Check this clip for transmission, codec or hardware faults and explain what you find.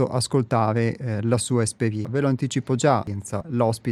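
One transmission fault is present: chunks out of order, from 2.05 s to 3.41 s, just after "ascoltare eh la sua". A 0.34 s block of speech plays three chunks late, after material that should follow it. The speech sounds jumbled, with three hard joins. On the waveform and spectrogram, these show as abrupt vertical discontinuities where harmonic tracks break and restart mismatched.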